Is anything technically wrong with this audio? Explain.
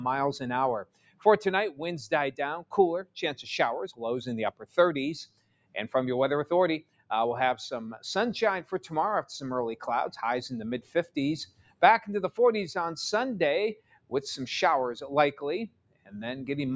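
Yes. A noise suppressor applied to music or sounds runs through the whole clip. A speech-oriented suppressor treats sustained tones, ambience and reverb tails as noise and pulls them down, so the level swings by roughly 15 dB, pumping and thinning while attacks pass through.

Sound cut by the noise suppressor appears at 0.85–1.25, 4.51–4.78, 5.26–5.76, 6.81–7.11, 8.63–8.89, 10.81–11.82, 13.75–14.13 and 15.33–16.14 s. In each span the suppressor judged held or decaying sound to be noise and ducked it by about 20–21 dB, only about 13 dB at 8.63 s, so sustains sink and tails are clipped short.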